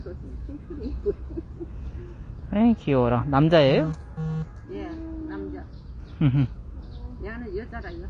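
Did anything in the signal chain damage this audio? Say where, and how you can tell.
Yes, at the codec: the sounds are dull and smeared throughout, and a spectrogram shows a flat ceiling at 9.7 kHz, likely from AAC compression at a bitrate near 32 kbps.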